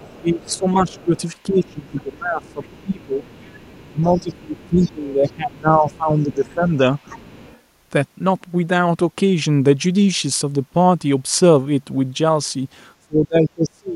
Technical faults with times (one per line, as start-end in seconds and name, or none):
0.00-5.31 other side's voice leaking through
0.18-3.24 speech suppressed in double talk
3.89-6.72 speech suppressed in double talk
5.93-7.60 other side's voice leaking through
13.04-13.95 speech suppressed in double talk